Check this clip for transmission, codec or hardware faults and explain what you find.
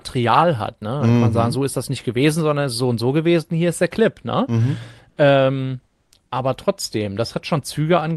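Two short pauses in this speech clip carry comfort noise in place of the background, from 5.09 to 5.17 s (80 ms) and from 5.87 to 6.12 s (250 ms). The likely cause is Opus discontinuous transmission: the sender stopped sending during these pauses, and the receiver filled them with synthetic noise. The real background gives way to a smoother substitute, about 2 dB and about 4 dB quieter, against the call path's roughly 12 kHz bandwidth.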